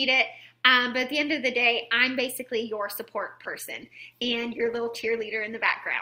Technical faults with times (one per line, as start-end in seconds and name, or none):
3.16-6.01 adaptive stream at a lower bitrate